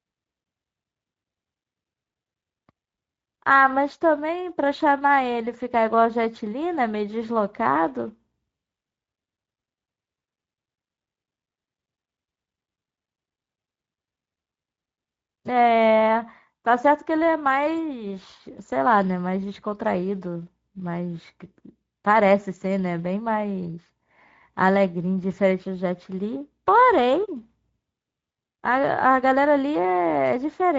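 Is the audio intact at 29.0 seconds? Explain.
No. Throughout the clip, including at 29.0 seconds, the speech has passed through the Speex codec at a low bit budget, consistent with roughly 16.8 kbps. Too few bits remain for the excitation, so the speech sounds noisy and hoarse, and nothing is left above 7.7 kHz.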